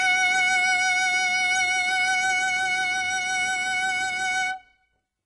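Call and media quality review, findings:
Treble on the music sounds synthetic and gritty throughout, cut off above 10.9 kHz; likely HE-AAC compression, with band replication faking highs from lower bands, which fits a bitrate around 12 kbps.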